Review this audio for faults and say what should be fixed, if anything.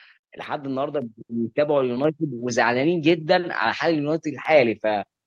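Block of digital silence at 4.45 s: the speech drops to silence for about 1.5 ms and then resumes. There is no fade at either edge, so the waveform jumps straight to silence and back, and the hole is heard as a tick or dip rather than as silence. The very short length fits a 64-sample block left unfilled, with the output callback missing its deadline once. To prevent it, give the audio thread more headroom or a larger buffer.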